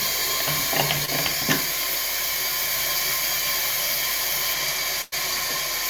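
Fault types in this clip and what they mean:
Short concealed packet loss: around 1.05 to 1.10 s a sliver of the stream arrived too late, and the receiver patched roughly 20 ms by extending what came just before, then crossfading back. You hear a quick smear or wobble where a tiny bit of sound is lost.
Channel delay (comb filtering): from about 4.53 to 5.85 s one channel lags the other by about a sample, and summing to mono cancels what they share. With a lag that small the first notch sits near 20 kHz, so it's more a slight dulling of the very top than obvious hollowness.
Burst of packet loss: between about 5.02 and 5.14 s a run of roughly 100 ms never made it. The receiver stretched the last sound and let it fade, giving a held buzz or decaying hiss, then picks up later with that chunk gone.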